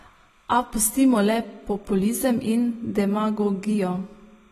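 Timecode bleed runs through the whole speech clip: a faint chirping warble sits far beneath the voice, flipping between pitches near 1 kHz and 2 kHz at a rate that fits 30-frame linear timecode leaking in from an adjacent track or cable. Compression damage is also present throughout and plainly audible. Nothing is left above 13 kHz, so the speech sounds dull and smeared, with a fizzy, warbling edge on sustained sounds and sibilants. The likely cause is AAC-LC coding at a low bitrate, consistent with about 32 kbps, where the encoder pulls its cut-off down and coarsely quantises the remaining bands.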